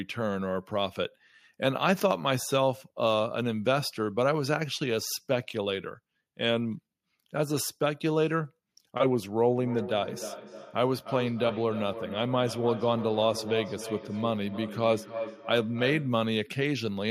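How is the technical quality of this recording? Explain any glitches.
The recording has one clear fault, a feedback echo between two devices, from 9.6 to 16.4 s. A second device replays the speech into the microphone, so each word returns about a third of a second later, thinner and ringing, peaking about 11 dB below the speech. On a waveform and spectrogram, this appears as evenly spaced, fading copies of each syllable.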